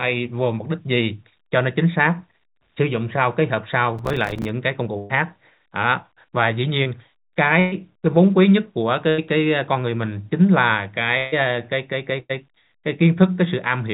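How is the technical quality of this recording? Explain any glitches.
Technical quality is limited by one stretch of crackle and repeated dropouts. The band is narrow, with nothing above 4 kHz, which fits a G.711 A-law call at 64 kbps.

Processor overload crackle runs from 3.99 to 4.49 s. Roughly twenty 5 ms buffers missed their deadline. Each left a silent gap, heard as gritty tearing.

A burst of packet loss strikes at 4.98, 7.60, 9.10, 11.18 and 12.20 s. About 80 to 140 ms went missing each time. The receiver stretched the last sound into a fading buzz or hiss, then jumped ahead.

A short concealed packet loss occurs at 6.84 s. About 20 ms never arrived. The gap was patched from the preceding sound, leaving a brief smear or wobble.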